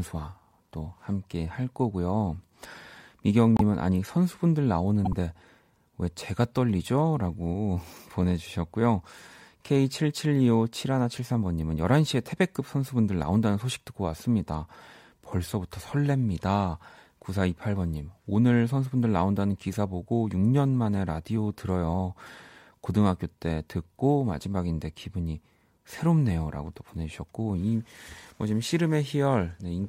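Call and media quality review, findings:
Short chirp-like bursts of misplaced energy at 3.56–3.61 s and 5.05–5.14 s, the first louder. Corrupt frame decoded: speech decoder played a couple of bit-damaged frames each time, misread gains and codes pushing energy to wrong frequencies.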